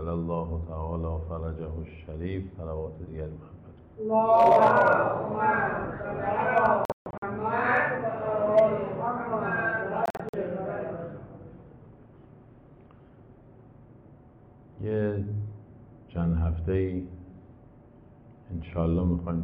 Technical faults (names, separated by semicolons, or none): hard clipping; Bluetooth dropout